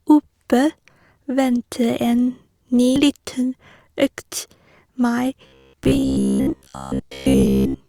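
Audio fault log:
2.96–2.99 s, damaged data in a compressed stream: a brief glitch where the decoder misreads corrupted frames, loses sync and jumps to the next valid header. A spectrogram shows a short broadband smear; the waveform has a small discontinuity where content is skipped.
5.47–7.88 s, robotic sound from repeated short buffers: the speech becomes a rigid metallic buzz near 66.7 Hz. Audio likely arrived too seldom, so a roughly 15 ms chunk was looped over most of this stretch. A spectrogram shows evenly spaced vertical striations; the waveform shows repeating identical cycles.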